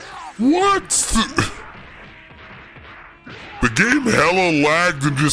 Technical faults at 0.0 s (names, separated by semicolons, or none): wrong sample rate